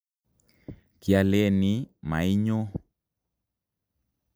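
No technical faults can be heard in this speech recording at any point.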